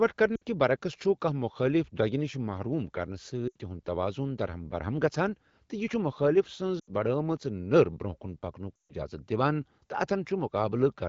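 Lost AMR speech frames at 0.35–0.43 s, 3.48–3.56 s, 6.79–6.90 s and 8.76–8.94 s: the decoder repeats the last good parameters at falling gain, so speech drops to near silence within two frames, longest in the final 140 ms gap.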